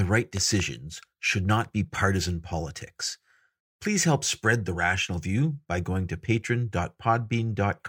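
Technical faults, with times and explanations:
0.37–0.62 s, loud pop: two sharp pops in quick succession sit on top of the speech just before "should not be partisan", peaking at about 10 dB above the signal while the speech continues underneath. The likely cause is a brief voltage step or pulse, such as from a connector, switch or static discharge, entering the signal path. Later stages shape that pulse into a hard transient, which is heard as a pop.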